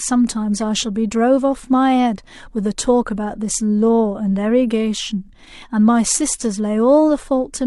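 Speech recording, no technical faults detected anywhere in the clip.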